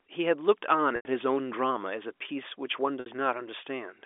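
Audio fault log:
0.96–1.05 s and 3.00–3.06 s, packet loss with pitch repetition: gaps of 90 ms and 60 ms are bridged by looping the last pitch period, giving a brief held buzz that fades before the speech resumes. On a spectrogram, frozen harmonic stripes thin into a dark band; the waveform shows repeated cycles tapering away.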